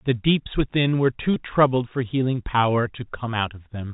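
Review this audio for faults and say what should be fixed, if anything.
Between 1.34 and 1.36 s there's packet loss with pitch repetition: 20 ms dropped out, which fits one lost packet, and the receiver looped the last pitch period into a brief buzzy hold. A slightly deeper jitter buffer or some forward error correction on the link should keep that from happening.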